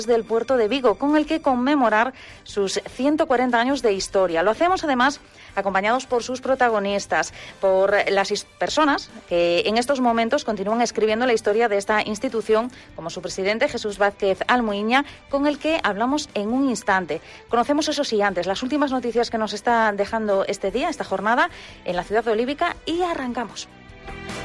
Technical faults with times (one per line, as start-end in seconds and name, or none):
none